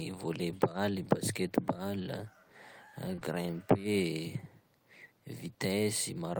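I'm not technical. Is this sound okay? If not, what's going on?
No. There is short concealed packet loss at 3.15 s and again straight after at 3.19 s, lasting until about 3.23 s. Two tiny pieces of the call, each about 20 ms long, arrived too late to be played. The receiving end covered each gap by stretching out the speech just before it, then blended back into the real audio. You may hear a quick smear or wobble there, or a short sound briefly going missing.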